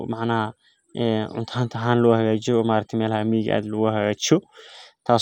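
No technical faults can be heard in the speech recording; the signal stays steady and intact throughout.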